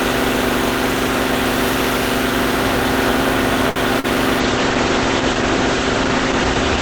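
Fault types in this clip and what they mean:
Short stall from a late packet: the sound is held and slightly buzzy around 3.69 s for about 64 ms, as the jitter buffer ran dry awaiting a late packet.
Short concealed packet loss: a brief smear near 4.0 s, where about 40 ms of audio never arrived and the receiver extended the preceding sound to cover it.
Call bitrate drop: from 4.41 s to the end the sound turns rough and muffled, as the encoder fell from 40 to 12 kbps and bandwidth narrowed to 8 kHz.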